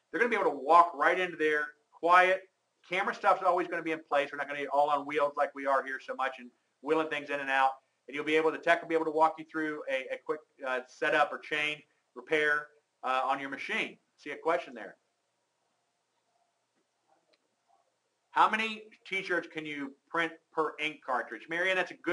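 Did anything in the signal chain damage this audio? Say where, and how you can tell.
No, the signal chain shows no audible damage at any stage, from capture through conversion, processing, transmission and playback.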